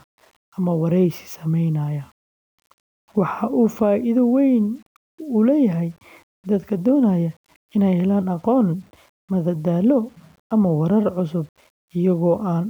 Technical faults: low bit depth without dither

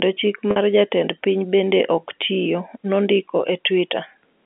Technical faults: packet loss with pitch repetition

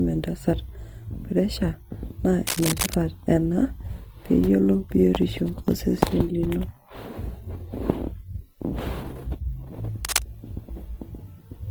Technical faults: Opus compression; cable scratch noise

